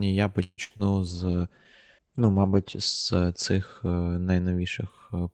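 At 0.43 to 0.60 s the speech stalls: the last sound stretches into a fading buzz, drops to about 40 ms of silence, then picks up exactly where it stopped. This call audio freeze was likely delayed packets draining the jitter buffer, inserting roughly 143 ms.

From 0.64 to 0.71 s there is a burst of packet loss. The sound holds as a dwindling buzz or hiss for about 57 ms, then jumps ahead. Around 60 ms of real audio never arrived, so that stretch is skipped rather than delayed.

Near 0.77 to 0.81 s a quick smear marks a short concealed packet loss. About 20 ms failed to reach the decoder in time, and the receiver bridged the hole by extending the previous sound before blending back, so that slice is lost.

From 1.09 s to 5.25 s the speech turns muffled and rough, with a watery edge. This is a call bitrate drop, from 32 to 13 kbps. The encoder narrowed the bandwidth from 20 kHz to 8 kHz and stayed at its lowest rate for about 1.85 s.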